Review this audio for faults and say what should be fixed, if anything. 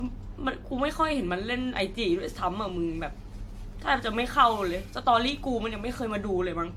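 Generation loss runs through the whole speech clip. The sound is swirly and hollow, consonant attacks are smeared, and nothing is present above 18.6 kHz. The smearing is worse than a single lossy encode at that bandwidth would produce, which fits an AAC-LC chain at around 96 kbit/s. The likely cause is repeated decoding and re-encoding, perhaps five times, with each pass quantising on a shifted frame grid so that noise and spectral gaps build up. To prevent it, keep the working copy lossless and encode to AAC only once, at the final export.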